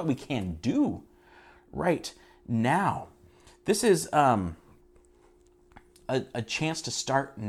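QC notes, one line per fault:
No problems turned up anywhere on this one, so there's nothing to flag.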